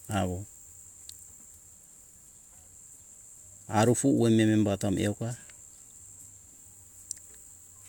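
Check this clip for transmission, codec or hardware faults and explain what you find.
Nothing wrong turns up anywhere in this speech recording.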